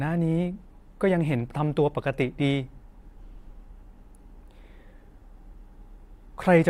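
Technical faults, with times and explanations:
No technical faults can be heard in the speech.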